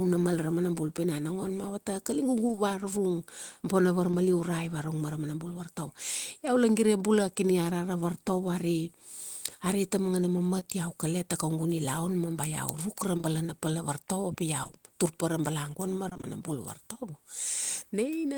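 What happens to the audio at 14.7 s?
Around there you get a quick burst of repeated packet loss, from about 14.63 to 14.75 s. It sounds like three short dropouts, none longer than about 20 ms, and each hole gets papered over by stretching the sound that came just before it. About half of that span is concealment rather than real audio, so for that instant the speech turns choppy, with small pieces clipped out.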